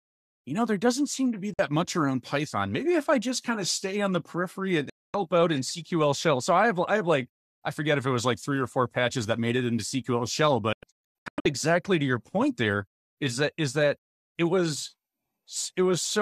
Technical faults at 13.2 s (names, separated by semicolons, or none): none